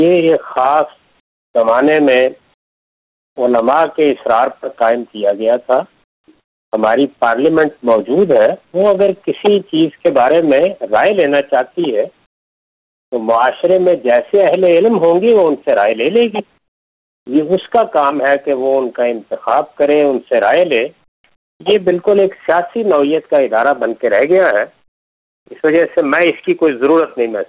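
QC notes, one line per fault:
1.2–1.54, 2.54–3.36, 6.04–6.28, 6.4–6.72, 12.26–13.12, 16.58–17.26, 21.36–21.6, 24.88–25.46 s: comfort noise in place of the background. In each pause of 240 to 860 ms, the detailed background, already about 47 dB below the loudest parts, gives way to a flat, featureless hiss about 17 to 27 dB quieter. The likely cause is discontinuous transmission: the sender goes silent and the receiver synthesises shaped noise until the sound resumes. The surrounding audio stops at 4 kHz, which fits a G.711 A-law call path.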